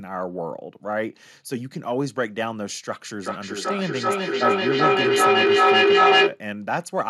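Speech with feedback howl from 3.22 to 6.44 s. A tone near 400 Hz swells to about 9 dB above the speech, pulsing roughly every 0.4 s. The mic-to-speaker loop gains level each trip.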